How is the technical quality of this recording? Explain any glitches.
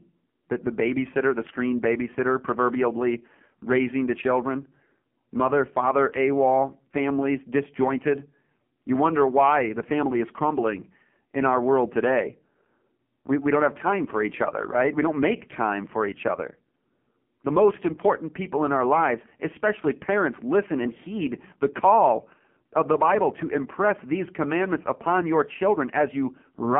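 The quality is poor. Throughout the recording, the speech carries the sound of an AMR narrowband mobile codec. The band runs from about 150 Hz to 3.4 kHz, with nothing above 3.4 kHz. That gives a thin, boxed-in telephone tone. The codec rebuilds speech from a vocal-tract model fed by sparse pulses in each frame. The damage here is heavy. The buzzy, synthetic edge fits a low mode near 5.9 kbps.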